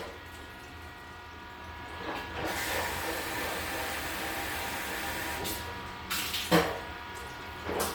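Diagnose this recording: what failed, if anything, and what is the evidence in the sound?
Bluetooth LC3 compression runs through the whole clip, at the codec stage, and the damage is plainly audible. The upper spectrum has a breathy, grainy texture where detail has been discarded and replaced with filled-in noise, though the band itself still extends to about 20.2 kHz. The likely cause is a Bluetooth LE Audio link coding each 10 ms frame with too few bits, which fits a rate of around 48 kbps.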